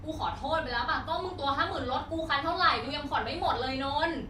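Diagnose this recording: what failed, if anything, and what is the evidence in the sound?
At the codec, AAC frame loss with concealment: about 43 ms at 2.83–2.89 s, likely one frame, was rebuilt from the previous spectrum, briefly smearing the speech.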